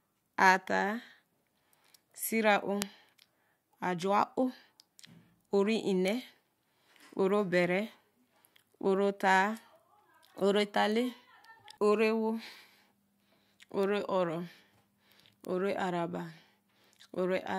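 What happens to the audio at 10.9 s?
A single sharp tick cuts through the speech at 10.92 s, bright and unrelated to the voice around it. It is a bit error spike: one sample jumps by a power of two, peaking at about -25 dBFS, then snaps straight back.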